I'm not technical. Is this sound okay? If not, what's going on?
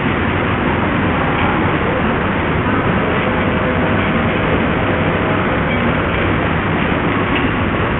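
No, the whole clip carries heavy damage from what is most likely Bluetooth SBC compression. The high, crisp parts of the sound drop out or flicker, and a gritty, grainy noise rides along throughout, unlike a simple muffled recording, which dulls evenly without that flickering grit.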